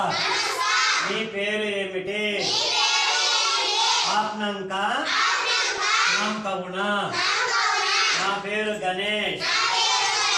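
The whole clip is likely shaped by MP2 compression at a low rate, around 80 kbps, which starved the 32 sub-bands of bits and switched the upper ones off. The sound is plainly dull, with a gurgling, grainy edge as surviving bands flicker and quantise coarsely.

From 5.78 to 5.83 s, DAB burbling appears as a brief burst of bit errors, at a rate of about 0.07 %, slips past error correction and corrupts samples over a handful of frames. Wrong samples put short blips of noise into single sub-bands.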